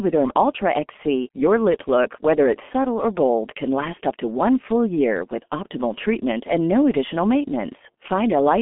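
From start to finish, the speech carries heavy G.723.1 codec damage. Nothing comes through above about 3.6 kHz, and the sound sits in a telephone band of roughly 200 Hz to 3.4 kHz. The codec works in 30 ms frames at a very low rate, which fits its 6.3 kbit/s mode. Its voice model updates slowly. So the speech sounds muffled and hoarse, and consonants blur together.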